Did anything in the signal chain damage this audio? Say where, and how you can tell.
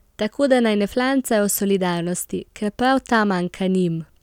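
No, nothing in the chain damaged it.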